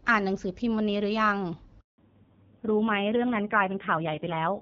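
At 1.8 s the call switches networks and no speech frames arrive for 180 ms. This handover gap leaves the speech silent until 1.98 s. From 1.98 s onward, a fallback to narrowband drops the call from HD Voice to a narrowband codec. Nothing above 4 kHz survives, so the speech turns duller and rougher, consistent with a low-rate AMR-NB mode.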